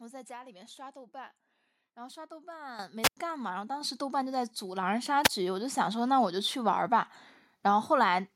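At 2.79 s the whole signal, speech and background alike, jumps louder by about 10 dB, then again by about 5 dB at 3.81 s. This is the microphone volume stepped up: the call software raised the device's input gain in abrupt steps.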